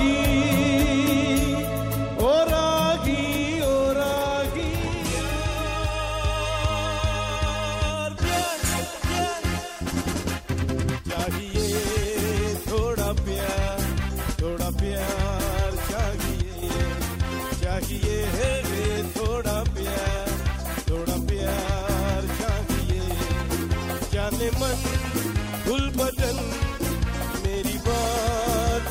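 At 16.42 s a sudden gain jump occurs, likely a digital gain change applied between one sample and the next with no ramp to smooth the transition. The level drops by about 7 dB at that instant and stays down until 16.63 s, about 0.2 s later. Because the change acts on the whole signal, the sound and its background noise fall together, giving an abrupt dip in loudness rather than a fade.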